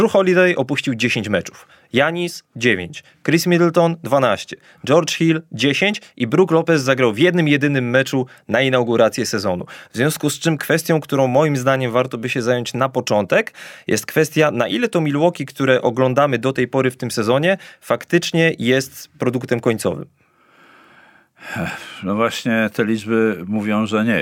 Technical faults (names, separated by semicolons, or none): none